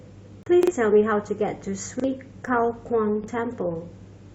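A speech recording with two kinds of timing fault. A gap between stream segments appears as a hard-edged hole of silence, about 34 ms long at 0.43 s, and as a much shorter dropout at 2.46 s, only about 5 ms. The two are roughly 2 s apart, which fits 2-second segments whose time stamps fail to meet, with the player padding the shortfall with silence. What distinguishes these from the stutters is that nothing is replayed and no speech goes missing. The sound simply pauses and resumes where it left off. A repeated buffer occurs at 0.63 to 0.72 s, where the same short piece plays three times in a row, and again at 2.00 to 2.04 s and 3.24 to 3.28 s, each with one extra play. Every repeat lasts about 43 ms, which points to a 2048-sample buffer replayed because fresh audio arrived late. Unlike the gaps, these are stutters of real sound with a hard join at each copy, and audio is lost afterwards: roughly a tenth of a second at the first and about 40 ms at each of the others.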